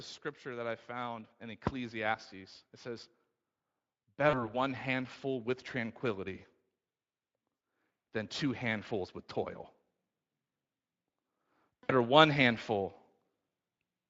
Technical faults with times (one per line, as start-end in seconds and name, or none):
0.42-2.27 automatic gain rising
4.16-6.46 automatic gain rising
4.29-4.50 VoIP packet loss concealed by the speech codec
7.55-7.61 VoIP packet loss concealed by the speech codec
11.84-11.92 VoIP packet loss concealed by the speech codec